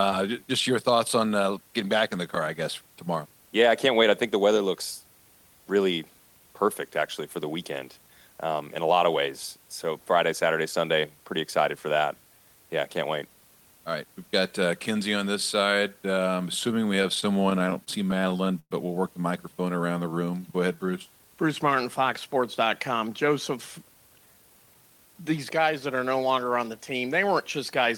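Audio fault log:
16.71 to 18.72 s, repeated stalls (stutter): the audio keeps catching and dragging here. There are 20 short holds, the longest about 116 ms, adding up to roughly 324 ms of stretched-out sound. Packets were arriving late, so the buffer kept running dry and the last sound got held over each time. Nothing's actually lost.
19.54 to 20.92 s, jitter buffer slow-down: this part plays at about 87% speed, with pitch unchanged, so it sounds a bit drawn out. The buffer was building back a reserve by repeating single pitch periods, which adds around 186 ms.
22.92 to 25.87 s, jitter buffer speed-up: here it's the other way, running at about 108% and sounding a little rushed, with pitch held steady. The buffer had too much queued up, so it kept cutting out short pitch-period slices, roughly 300 ms in total, to get its delay back down.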